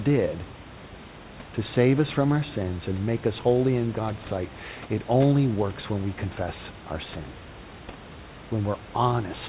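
No faults are audible in this speech; the band stops at 4 kHz as expected from a narrowband G.711 call path, and the room noise sits about 23 dB below the speech.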